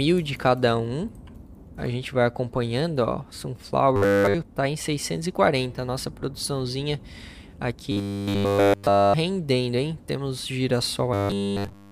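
Three stretches, 3.96 to 4.34 s, 7.92 to 9.14 s and 11.14 to 11.92 s, turn into a rigid 100 Hz metallic buzz, the robotic sound of repeated short buffers, likely from one 10 ms block replayed throughout.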